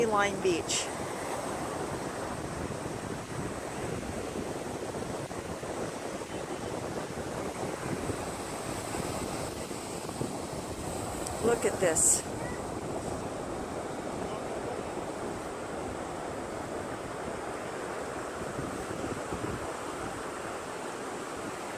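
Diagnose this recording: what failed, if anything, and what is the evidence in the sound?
Nothing stood out on a careful listen, and I can't point to any stage of the chain that appears to have failed.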